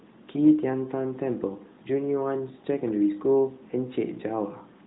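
No technical faults are audible.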